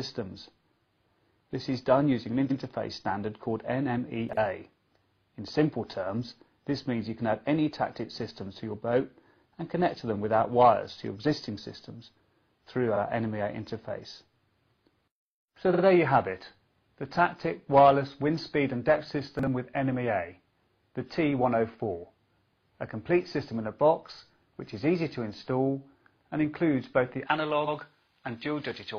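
At 2.47 to 2.56 s, repeated frames: a 92.9 ms block of compressed frames is decoded a second time, so the same fragment plays back to back as a stutter and adds 92.9 ms to the running time. At 4.29 to 4.37 s, chunks out of order: a 40 ms chunk arrives one chunk late and plays after the chunk that should follow it. Nothing is lost, but the sequence is jumbled across three hard joins. The same stutter returns at 12.91 to 12.97 s, where a single 46.4 ms frame plays once more, and at 15.70 to 15.80 s, where a 46.4 ms frame plays twice more, adding 92.9 ms. At 19.39 to 19.47 s, another 40 ms chunk plays one position late. From 27.27 s to the end, pre-emphasis left on: a J.17 treble boost was applied without the matching de-emphasis, leaving about 11 dB too much at 10 kHz relative to 1 kHz, so the sound turns thin, bright and sibilant. Inside that stretch, at 27.64 to 27.73 s, a 92.9 ms block repeats once more. 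Together the four repeats lengthen the audio by about 325 ms.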